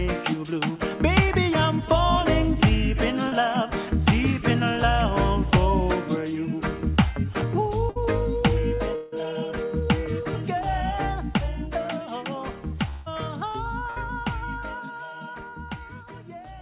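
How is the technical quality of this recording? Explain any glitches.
The recording has six brief interruptions in three kinds, all typical of a lossy network link. The band-limited call sound, with nothing above 4 kHz, fits a G.711 mu-law link at 64 kbps.

Short concealed packet loss at 3.28 to 3.34 s and 15.50 to 15.57 s: a few tens of milliseconds never arrived, and the receiver extended the preceding sound. This leaves a quick smear or wobble rather than an audible gap.

Bursts of packet loss at 7.90 to 7.97 s and 13.90 to 13.98 s: about 60 ms went missing. Each is heard as a held buzz or hiss that fades, then the audio resumes slightly further on.

Long network dropouts at 8.95 to 9.14 s and 12.90 to 13.08 s: roughly 160 ms is gone, most likely because nothing arrived for that stretch. The longer fading fill, which never reaches silence, sets these apart from the bursts.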